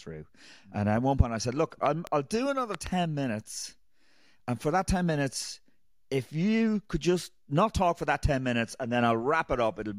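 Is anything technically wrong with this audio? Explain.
Yes, there are loud pops in this speech. From 1.86 to 2.09 s, just before "will do another", there is a double pop, and from 2.75 to 2.89 s, just after that phrase, there is another. Each pair peaks at roughly 10 dB above the speech, which continues underneath. The likely cause is a voltage pulse from a switch, plug, static or driver glitch. On a waveform these show as sharp spikes; on a spectrogram, thin full-height vertical lines.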